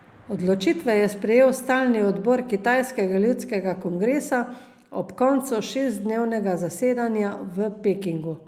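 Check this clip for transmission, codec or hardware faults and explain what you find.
I find no faults to explain in this clip.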